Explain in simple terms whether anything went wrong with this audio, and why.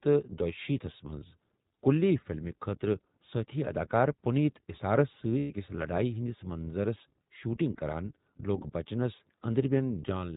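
iLBC codec, throughout the clip: the speech was squeezed through a narrowband internet-phone codec, so nothing above 4 kHz survives and the voice sounds thin, slightly rough and synthetic.

Lost iLBC frames, from 5.38 to 5.51 s: about 120 ms of audio data went missing, and the decoder filled the gap by repeating the last bit of voice with added noise. That produces a brief buzzy, held vowel, and then the speech comes back cleanly almost at once.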